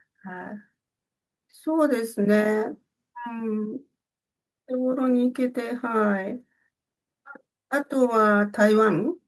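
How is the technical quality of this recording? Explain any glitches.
No technical faults are audible in this recording.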